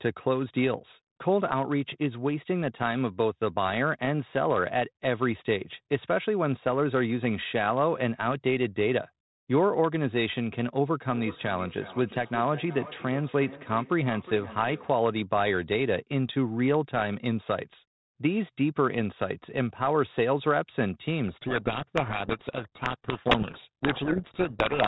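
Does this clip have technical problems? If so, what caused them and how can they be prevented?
Yes. From 11.12 s to 15.0 s there is feedback echo between two devices. The sound returns at a steady interval of roughly 0.4 s, at up to about 15 dB below the speech. Two devices in the same room share the call. One plays what the other's microphone sent, and that microphone picks it up again. Each echo canceller only removes its own device's playback, so the repeats get through. To prevent it, mute the speaker or microphone on one device, or use headphones.

From 21.28 s to the end there is a codec payload misread. The speech sinks under harsh, grinding distortion. The G.726 code words arrive with their bit order reversed from what the decoder expects. It still decodes each frame, but most sample differences come out wrong. The damage continues until both ends agree on the packing. To prevent it, configure sender and receiver to use the same G.726 bit-packing convention.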